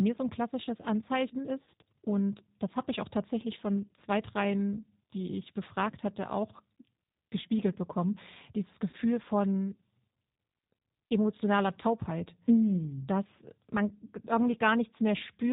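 Throughout, the G.729 codec is plainly audible. The speech sounds rough and synthetic, with nothing above 4 kHz, which fits an 8 kbit/s stream.

VoIP packet loss concealed by the speech codec occurs three times. At 1.65 to 1.67 s, just before "und das habe ich", about 20 ms of audio is missing. The decoder extrapolates from the previous frame, giving a brief buzzy smear. The same happens at 5.91 to 5.95 s, before "hatte auch". At 8.89 to 8.95 s, after "gespiegelt bekommen dieses", a 40 ms gap gives a longer fading buzz.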